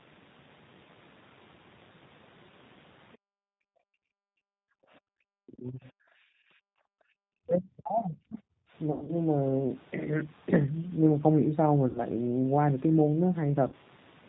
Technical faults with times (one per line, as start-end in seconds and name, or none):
0.00-14.28 G.729 codec
3.16-4.09 background gated by the echo canceller
4.37-4.61 speech suppressed in double talk
4.89-5.04 background gated by the echo canceller
5.32-5.86 speech suppressed in double talk
6.14-7.13 background gated by the echo canceller
7.41-8.43 speech suppressed in double talk
8.92-9.18 VoIP packet loss concealed by the speech codec
11.89-12.01 VoIP packet loss concealed by the speech codec
13.68-13.74 VoIP packet loss concealed by the speech codec